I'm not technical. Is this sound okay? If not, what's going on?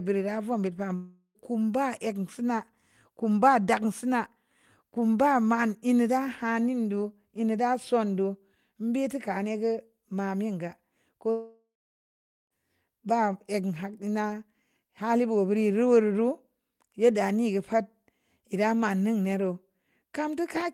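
No. The speech cuts out twice, at 0.95 to 1.38 s just after "ra vom bu't ba" and at 11.31 to 12.53 s, likely a long network dropout. The sound buzzes briefly, fades to silence, then resumes with that part missing.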